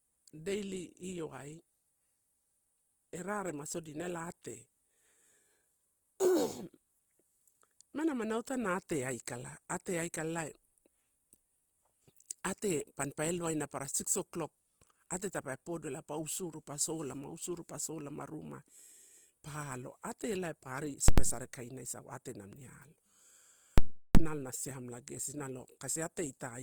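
The speech is grainy and rough throughout. Bands are filled rather than left empty, so the tone turns noisy instead of swirling. Fullband width is kept. This is likely Opus compression in its music mode, at a rate that fits about 24 kbps.

At 21.08 to 21.18 s, just before "sare kaina", invalid numbers at full scale cause a hard burst. The output is pinned at one extreme value for 93 ms, fitting a 4096-sample block. At 23.78 to 24.15 s, before "ela na siamela", a loud pop opens and closes a 372 ms gap.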